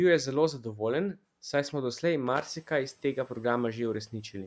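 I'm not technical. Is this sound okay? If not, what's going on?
No. There is a brief loose connector crackle from about 2.27 to 2.46 s, right after "saj smo doslej" and just before "iz tega". A worn or dirty plug or socket was shifting slightly, so the contact kept breaking and reconnecting, chopping the sound into a scratchy, uneven burst. Unlike a single digital click or a clean dropout, it sounds rough and irregular, like brief static when a cable is wiggled.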